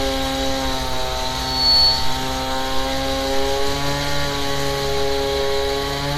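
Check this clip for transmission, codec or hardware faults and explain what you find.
Two faults are present: generation loss across the whole clip and a loudspeaker feedback squeal near the start.

Generation loss runs throughout. The sound is swirly, hollow and smeared, with blunted attacks and nothing above 19.7 kHz. This is likely the result of repeated lossy MP3 encoding at 96 kbit/s, something like seven passes. Each decode and re-encode quantises again on a shifted frame grid, so the noise and spectral holes pile up. A single 96 kbit/s encode would sound cleaner. The compounding smear sets this apart from ordinary low-bitrate artefacts.

A loudspeaker feedback squeal runs from 1.34 s to 2.21 s. A single 4.4 kHz tone swells over just under half a second and peaks at about 5 dB above the surrounding sound. It comes from a microphone picking up the speaker it feeds, with the loop gain going above one at that frequency, so the tone feeds itself until the loop is broken. 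The self-reinforcing rise is what separates it from a steady interfering whistle, which would hold a constant level.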